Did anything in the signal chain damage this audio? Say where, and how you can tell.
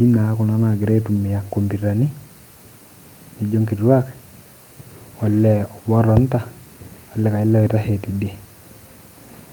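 Yes, at the network stage: a lost packet rebuilt from error correction at 1.15–1.17 s and 5.51–5.57 s. Opus played the low-bitrate copies from the following packets, so there's no gap. The waveform stays continuous, and the spectrogram shows briefly rougher, noisier 20 ms and 40 ms patches.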